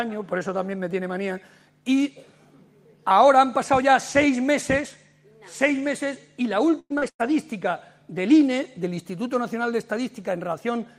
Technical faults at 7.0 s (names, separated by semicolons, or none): burst of packet loss; lost packet rebuilt from error correction; short concealed packet loss